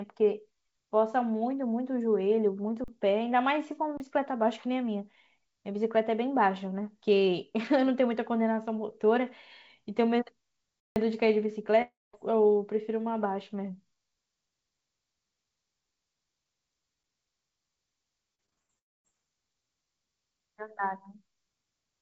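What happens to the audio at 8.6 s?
At 8.6 s the speech carries on intact, with only the steady band limit of the G.722 call path, which leaves nothing above 8 kHz.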